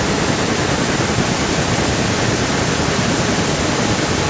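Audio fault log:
Throughout, echo leak: the speech is doubled by a copy 334 ms late and only slightly quieter, likely a loudspeaker echo canceller passing its microphone pickup back. On a spectrogram, syllable harmonics reappear a third of a second later, and the waveform shows overlapping doubled envelopes.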